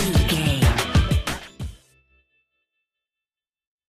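A dropped buffer (overrun), likely from the program failing to read its samples before the hardware overwrote them, puts a skip at 1.09 s. A few milliseconds of audio are lost, and the two sides butt together with no gap, so the sound jumps slightly forward.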